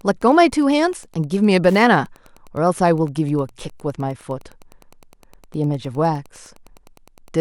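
Speech runs over a faint, steady ticking present throughout, about ten clicks a second, which is Wi-Fi interference. A nearby Wi-Fi radio's beacon, repeating every 102.4 ms, is being rectified by the audio circuitry and lands roughly 35 dB below the speech. That slow, regular tick separates it from GSM buzz, whose 217 Hz pulse rate fuses into a continuous rasping tone, and from mains hum, which is a smooth low pitch with no distinct clicks.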